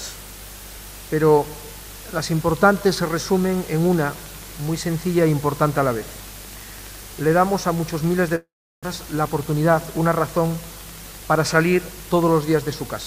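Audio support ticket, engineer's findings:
Train of clicks, 2.69 s to end of clip. Regular ticking at 11.9 clicks/s, peaks roughly level with the programme audio, audible through pauses as well. Pulses near-identical in shape and evenly spaced. Likely cause: interference from nearby equipment or a faulty connection or power supply injecting a periodic pulse. Not sound-related.

Long network dropout, 8.35–8.87 s. Audio stops. The gap is first filled with a fading buzz or hiss continuing the last sound, then about 0.36 s of silence. About 0.4 s of audio never plays, and playback resumes past the missing section. Likely cause: stalled packet stream, with the receiver concealing and then muting. Leaves the buffer around 70 ms further behind.

Jitter buffer speed-up, 8.99–10.08 s, immediately after the dropout recovers. Playback runs at 106% speed with pitch unchanged and sounds slightly hurried. 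The receiver cuts short pitch-period-length pieces repeatedly to drain the excess buffered audio, roughly 70 ms in total. This is consistent with delayed packets arriving in a burst after the outage. Component: receiver jitter buffer and time-scale adjustment.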